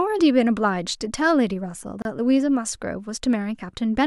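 At 2.02 s a gap at a join of encoded pieces cuts the speech for 31 ms: separately encoded segments were joined untrimmed, leaving a silence with smeared edges.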